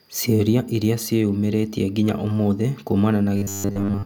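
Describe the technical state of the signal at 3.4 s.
At 3.4 s you're inside a stretch of robotic sound from repeated short buffers, running from 3.36 s to the end. The speech turns into a stiff, metallic buzz pinned at 100 Hz, which fits a roughly 10 ms chunk being replayed over and over. The likely cause is new audio arriving too seldom, so most of the real signal gets skipped.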